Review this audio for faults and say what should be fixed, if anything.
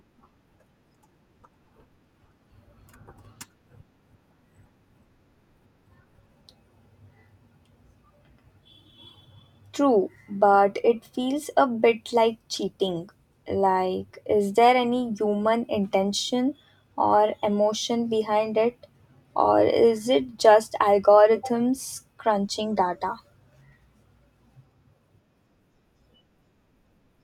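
Nothing needs fixing; no faults are audible here.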